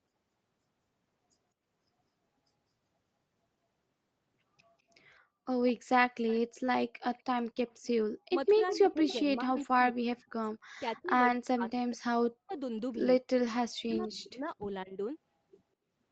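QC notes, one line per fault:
7.15–7.87 s, 8.46–9.14 s and 9.57–9.67 s, echo leak: a delayed copy of the speech trails the original by 200 ms. It is about 40 dB down in the first stretch, about 10 dB down in the second, and about 30 dB down in the brief third. The likely cause is a far-end loudspeaker whose echo canceller let part of the pickup through. On a spectrogram the harmonic striations reappear as a weaker ghost shifted 200 ms right.
8.27–10.37 s, 10.82–12.52 s and 13.55–15.0 s, speech suppressed in double talk: within each span the speech repeatedly dips, loses its upper range or drops out in chunks, with the deepest cuts around 40 dB and roughly a second affected per span. This is likely an echo canceller turning down both its own talker and the echo while both sides talked at once, unable to separate the talker from the returning echo. On a spectrogram this looks like vertical gaps and a thinned top band. 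On the waveform the envelope is pinched abruptly rather than tapering naturally.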